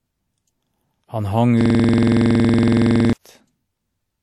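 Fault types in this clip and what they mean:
WMA compression: throughout, washy, ringing smear with signal-following hiss and nothing above 14.3 kHz, likely from low-bitrate WMA coding, fitting roughly 48 kbps.
System hang loop: from 1.61 to 3.13 s, a 46.44 ms slice repeats about 33 times, buzzing at 21.5 Hz, consistent with a frozen 2048-sample buffer.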